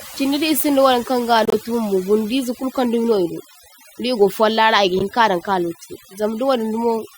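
Throughout the speech, overdone noise removal has pulled individual frequency bands down whenever they sit near the estimated noise floor. The background drops and breaks up into twinkling specks, and the voice's quieter components vanish with it.

Between 1.45 and 1.54 s, after "isinda wayaŋ kaŋ ga" and before "bumbo bundize kulkaŋdumi idu", a corrupt frame decoded produces an error. Its length fits roughly four damaged frames. At 4.99 to 5.02 s, between "digo follara igi" and "hinkadaŋ ka", a shorter single-frame error occurs. In both, flipped bits sent misread gains and codes into the decoder, which placed energy at wrong frequencies.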